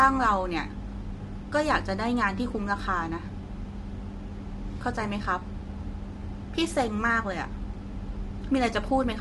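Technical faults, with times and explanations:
Throughout, low-delay AAC compression: speech sounds rough and grainy, with nothing above 11.5 kHz. Likely AAC-ELD, its short frames blurring harmonics, near 32 kbps.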